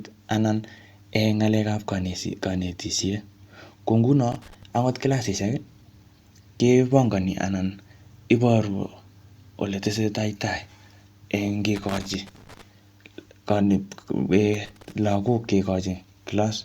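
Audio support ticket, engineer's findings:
Worn or dirty contact making and breaking, a loose connector crackle chopping the signal: irregular scratchy bursts at 4.32–4.63 s (before "angot kilasisiek"), 11.76–12.62 s and 14.54–14.92 s.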